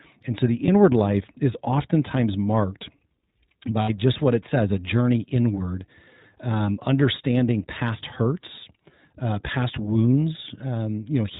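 From start to finish the speech sounds band-limited and slightly rough, with a faintly synthetic edge and no content above 4 kHz. This is plainly audible iLBC codec damage. The narrowband codec rebuilds each short frame's excitation on its own, without drawing on the preceding frame, and that coarse modelling produces the grainy texture. The sound fits iLBC running at 15.2 kbps with 20 ms frames.

Between 3.82 and 3.90 s, just before "just what it says", the speech turns briefly into a held, buzzy, slightly breathy tone, then snaps back to normal. These are lost iLBC frames. With packets missing, the decoder filled the gap by repeating the last pitch cycle blended with noise. The gap covers about 60 ms of audio, which fits three 20 ms frames. Because each iLBC frame decodes independently, the speech recovers immediately afterwards.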